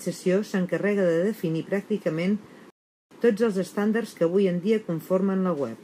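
At 2.70 s the speech stops dead in a rebuffering stall. About 0.41 s of silence follows while playback waits for data, then it resumes exactly where it stopped.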